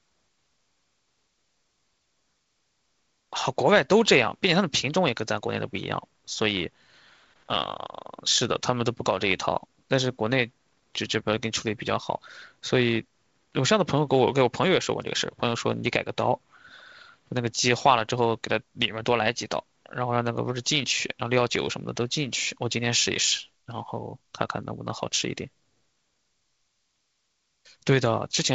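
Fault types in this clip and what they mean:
Nothing here counts as a fault: the speech comes through the wideband phone coding just as that link is meant to sound, so there's nothing to list.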